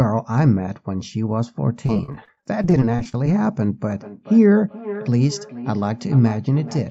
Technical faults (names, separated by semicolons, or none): repeated packet loss (robotic sound); feedback echo between two devices